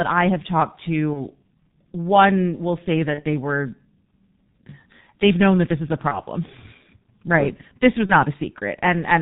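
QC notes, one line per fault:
Throughout: G.723.1 codec at 6.3 kbit/s, heavily damaged. The speech is muffled with nothing above 4 kHz, and it sounds hoarse with smeared consonants. This happens because the 30 ms frames update the voice model slowly, which sets it apart from a simple low-pass filter that would stay clean.
1.14–1.20, 3.14–3.22 (after "one will say", before "they were"), 6.09–6.22 (after "that this is a"), 8.06–8.14 (after "right sure this was"): VoIP packet loss concealed by the speech codec. Each gap fits one lost 30 ms frame. The decoder repeats its last pitch and filter at falling gain, which produces a brief buzzy tone or coloured noise that fades instead of silence. The speech stays weak for a moment after each gap, which a plain dropout would not do.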